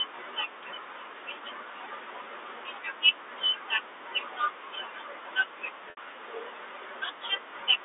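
At 5.90 to 5.97 s, packet loss with pitch repetition: about 70 ms of the G.711 telephone stream went missing, which fits seven 10 ms packets. The receiver bridged it by repeating the last pitch period, so the speech briefly holds on a slightly buzzy, frozen tone.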